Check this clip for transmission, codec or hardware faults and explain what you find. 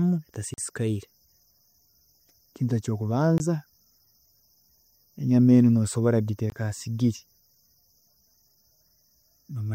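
The speech has three dropouts to a block of digital silence. The first runs from 0.54 to 0.58 s, about 40 ms. The second runs from 3.38 to 3.40 s, and the third from 6.50 to 6.52 s, right after "enyama enu nosobola". Both of those last 20 ms. In each, a run of samples is replaced by silence. The signal cuts out and returns with no fade, so the gaps sound like brief holes.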